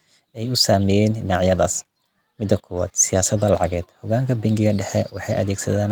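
Speech, with no audible faults.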